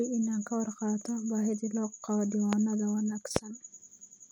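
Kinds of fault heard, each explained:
Loud pop: a sudden voltage spike, likely from a switch or static, enters the signal, giving sharp pops at 2.53 and 3.36 s, far above the speech.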